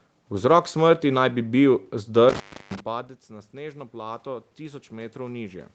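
Intermittent contact at 2.29 to 2.80 s, just after "smrti naj bi bil": a loose plug or cable briefly lost connection, so the speech drops out for about 0.33 s, bracketed by crackle at each edge, with faint hiss audible while the line hangs open.

Automatic gain rising from 3.27 s to the end: the input level had fallen by about 17 dB, and the gain control responded by lifting its gain gradually, so the voice and the room background swell up together over a second or more.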